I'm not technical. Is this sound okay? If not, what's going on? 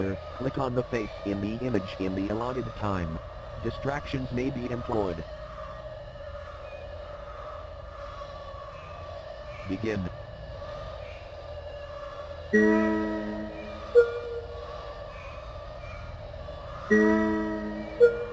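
Yes, there's nothing technically wrong here: the signal holds steady the whole way, with no breaks, jumps or disturbances to point to.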